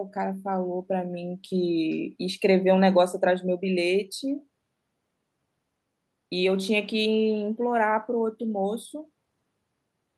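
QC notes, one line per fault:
No technical faults are audible anywhere in the speech signal, which keeps an unbroken waveform across the whole recording.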